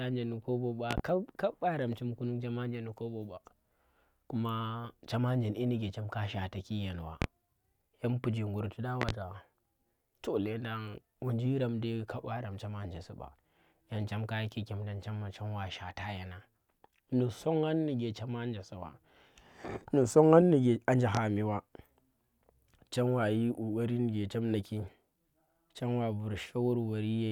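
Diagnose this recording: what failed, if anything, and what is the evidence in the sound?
Loud pops from the analogue wiring stage, likely a plug or switch transient, occur as double pops at 0.91–1.01 s and 9.02–9.12 s and single pops at 7.22 s and 21.15 s, roughly 20 dB above the speech. Unlike dropouts or clicks from lost data, the speech continues uninterrupted beneath each thump.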